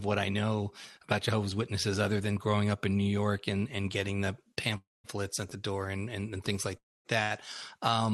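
At 4.77 to 5.06 s, right after "and and getting the", the sound hangs on a brief fading buzz and then about 0.2 s of silence before resuming with "at the door and". At 6.77 to 7.07 s, after "and and things like", the same buzz and roughly 0.24 s of silence recur. Both are a call audio freeze, likely from packets held up in transit until the jitter buffer emptied, which inserts a gap without losing audio.

At 7.23 to 7.32 s, a sound is held slightly too long with a faint dip. This is a short stall from a late packet, in which the receiver stretched the last sound for about 75 ms until the packet arrived.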